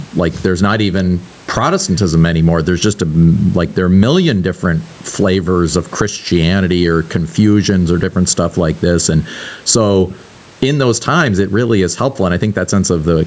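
Gain pumping runs through the whole clip. The swing is roughly 15 dB. The likely cause is gain set far too high, with a fast limiter pulling it down. The speech sounds squashed.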